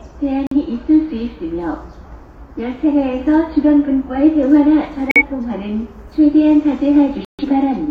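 Everyday sounds, interrupted three times by a corrupt frame muted fault: abrupt silences at 0.47–0.57 s, 5.09–5.22 s and 7.25–7.44 s, where damaged compressed frames were rejected by the decoder and replaced with silence. The waveform drops instantly to a flat line, and the spectrogram shows clean vertical gaps with no timing shift.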